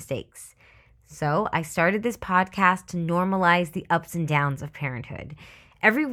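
Nothing in this bit of speech points to a technical fault, so there's nothing to flag here.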